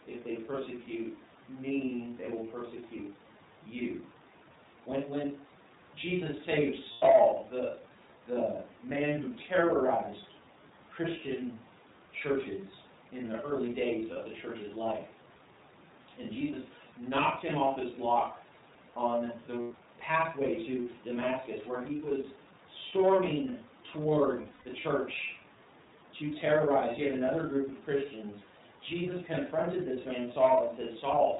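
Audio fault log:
throughout, iLBC codec: The audio is confined to narrowband, with nothing above 4 kHz, so sibilants are dull and the speech has a boxy, telephone-like character. Each frame's excitation is coded without reference to the previous one, which leaves a plainly audible rough, slightly synthetic grain on voiced sounds. The damage level and timing fit iLBC's 30 ms-frame mode at 13.33 kbps.
5.24–5.70 s, digital wireless dropout: The sound cuts to near silence for about 460 ms, then returns. Entry and exit use a very short fade, and there is no crackle or noise burst on either side. This is what happens when a digital radio receiver loses too much data and mutes its output instead of passing corrupted audio.
6.92–7.03 s, 14.12–14.17 s, 19.62–19.72 s, 24.42–24.66 s, lost iLBC frames: The first three gaps are about 90 ms before "the the man who", about 30 ms between "in the early days" and "the church's life", and about 90 ms between "his block on the" and "pathway to". 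Each is filled with a held, faintly buzzy vowel-like tone. The decoder repeats the last pitch cycle mixed with noise to cover the missing packets. The last event spreads about 180 ms of concealment over 240 ms, with the longest stretch around a tenth of a second. Because iLBC frames stand alone, normal speech resumes almost immediately after each gap.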